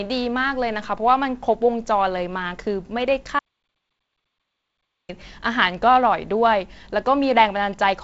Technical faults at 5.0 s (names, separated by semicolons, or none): audio dropout to silence